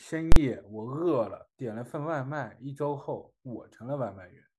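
At 0.32 s, invalid numbers at full scale pinned a 43 ms block, which fits a 2048-sample buffer, to maximum output, heard as one loud bang.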